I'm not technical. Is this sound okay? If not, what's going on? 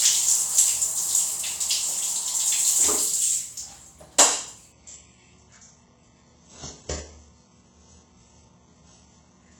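No. From about 4.72 s to the end, the sound abruptly turns dull, with nothing above 8 kHz. This is an adaptive stream at a lower bitrate: the connection slowed, so playback switched without a gap to a much lower-quality version.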